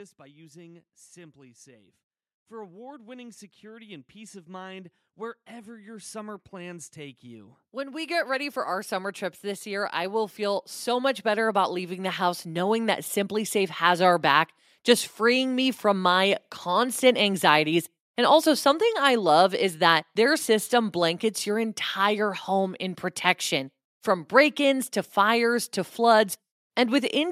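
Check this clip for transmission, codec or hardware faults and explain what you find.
There's one fault here: automatic gain rising, running from about 2.47 s to 13.82 s and settling just before "our back just freeing". The gain control judged the input too quiet and kept nudging its gain upward over those eleven-odd seconds, about 23 dB in total. Because it's the whole signal being lifted, the voice and the room noise behind it swell together, so the background creeps up right alongside the speech.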